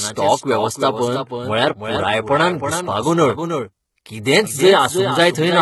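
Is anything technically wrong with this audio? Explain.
Yes, two faults run through the whole clip.

Doubled audio track, throughout: a second full-band copy of the speech trails the original by roughly a third of a second, about 5 dB quieter. It is likely a second capture through a slower path, or an edit that left two copies out of step. The trailing copy has no decay or room colour, so every syllable is followed by a dry, distinct repeat that smears the speech.

HE-AAC compression, throughout: the damage is heavy. It sounds like a very low bitrate, around 16 kbps. The codec keeps only the lower part of the spectrum and rebuilds the treble by copying lower bands upward under a coarse envelope. The top end stays bright but is synthetic, with harmonics that don't line up across the crossover. The s sounds come out gritty, metallic and lispy.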